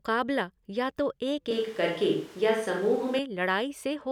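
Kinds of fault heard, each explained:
Switch to a distant microphone: Right after "या तो एक", at 1.51 s, the speech turns suddenly roomy and hollow. The bass thins out. Background noise rises to roughly 25 dB below the speech. The loudness stays about the same. At 3.19 s the close, full sound returns just as abruptly. The likely cause is that the close microphone dropped out and a farther one, hearing more of the room, was used for that stretch.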